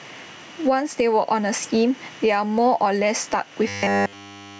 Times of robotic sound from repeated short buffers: 3.68-4.59

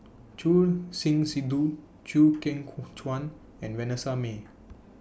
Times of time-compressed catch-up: none

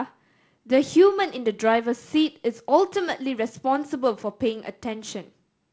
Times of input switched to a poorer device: none

